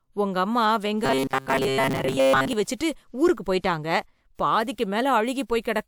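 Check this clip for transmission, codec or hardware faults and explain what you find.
One fault is present. Robotic sound from repeated short buffers, 1.05 to 2.53 s: audio likely arrived too seldom, so a segment of about 7.5 ms was looped over most of that stretch. This stamps a fixed 134 Hz buzz onto the speech, which turns rigid and metallic.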